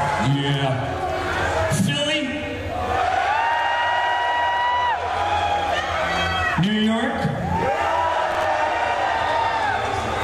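At about 8.31 s a short burst of processor overload crackle comes in and clears by 8.45 s. What's happening is the processor falling behind on its buffer deadlines several times in a row, something like five misses, which fits buffers of around 10 ms each. Each missed slot gets filled with a scrap of old audio, so you hear hard-edged repeats butting together as a gritty tearing over the sound before it settles.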